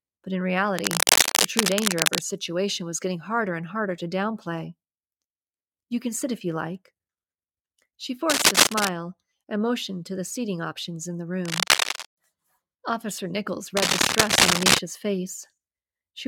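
A worn cable or connector being moved, with its contact resistance jumping erratically, is the likely cause of the cable scratch noise in this speech clip. It adds rustling bursts, a little louder than the speech and at times much louder. They fall at 0.78–2.20 s (after "but in"), 8.30–8.88 s (before "and motioned to the"), 11.45–12.07 s (after "seating options in the") and 13.77–14.79 s.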